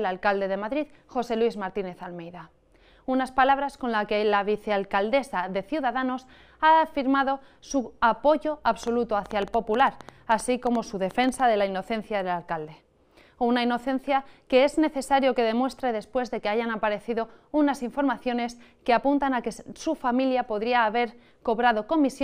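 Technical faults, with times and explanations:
8.83–11.41 s: train of clicks. About twenty similar clicks, roughly seven per second, at an uneven pace, peaking about 5 dB above the sound. Likely interference or a faulty connection.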